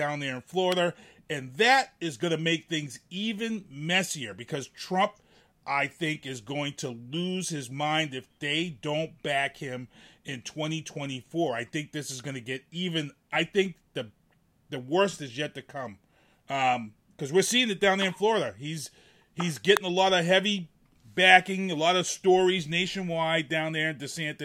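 A speech recording carries two electrical switching spikes: a sharp snap at 0.72 s, right after "there in", peaking roughly -15 dBFS, and a harder one at 19.77 s, just before "a lot of heavy", reaching roughly -5 dBFS. Each is likely a nearby switch or discharge arcing into the audio line. On a waveform they appear as isolated needle-thin spikes; on a spectrogram, as narrow vertical lines spanning the full frequency range.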